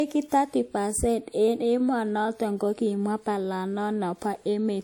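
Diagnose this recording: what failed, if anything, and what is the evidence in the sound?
Codec stage, throughout: low-bitrate audio saved at a high bitrate. Nothing above 19.6 kHz; the MP3 can't restore what a likely lean first encode removed.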